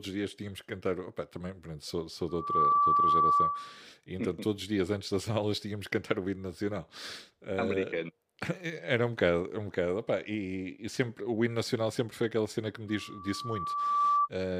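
At 2.28 s, right after "também pronto sou sou", a loudspeaker feedback squeal sets in. The microphone is picking up the loudspeaker it feeds, and loop gain exceeds unity at 1.2 kHz. That tone swells within a fraction of a second to about 10 dB above the speech and rings until 3.83 s. It returns at 12.88 s after "aquela cena que me", building more slowly over about a second, and holds to 14.29 s.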